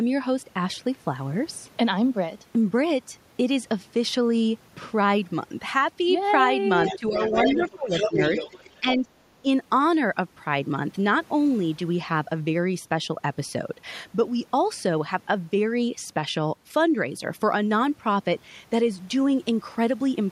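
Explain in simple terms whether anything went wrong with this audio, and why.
Yes, two problems show up around 7 to 9 seconds. The first is the other side's voice leaking through: a faint second voice appears at 6.86 to 6.99 s, then a much louder one from 7.15 to 8.58 s. The likely cause is an echo canceller that failed to remove the far end's loudspeaker sound from the microphone.

The second is speech suppressed in double talk, with the main voice dipping and breaking up at 6.96 to 7.36 s, 7.56 to 8.2 s (the deepest drop), 8.54 to 9.06 s, and briefly at 9.42 s. This is likely the same echo canceller turning everything down while both sides talked at once.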